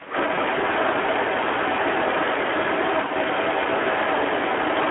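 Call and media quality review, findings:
Speex codec, whole clip, 0 to 4.9 s: speech sounds plainly hoarse and noisy. Band-limited to roughly 300 Hz to 3.4 kHz, which suggests a narrowband line. On the spectrogram, nothing shows above 3.4 kHz, and harmonics look smeared and blurred by noise, not clean striations. The damage fits an 11 kbps CELP mode, where too few excitation bits leave the voicing grainy.

Speech suppressed in double talk, 0.00 to 0.07 s: a short level dip at the very start, with the voice about 15 dB down for roughly 70 ms. The likely cause is the echo canceller ducking the near talker while the far side is also active. On the waveform, the opening envelope is squashed before reaching full amplitude. On the spectrogram, that first slice is faint.

Echo leak, 0.0 to 4.9 s: a delayed ghost copy of the speech trails throughout, 279 ms behind and around 10 dB below the direct voice. 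The likely cause is residual loudspeaker pickup the loudspeaker side's canceller failed to remove. On the spectrogram, faint duplicate formant patterns are offset about 0.28 s to the right. On the waveform, low-level bursts fill the gaps after each phrase.

VoIP packet loss concealed by the speech codec, 0.35 to 0.45 s: a brief stretched smear in place of the speech, fading out, then weak and distorted audio until about 0.45 s. This fits a single lost 20 ms frame, with the decoder extrapolating from the last pitch and filter state. On the spectrogram, flat repeated harmonics lose energy. On the waveform, a decaying periodic segment precedes the recovery.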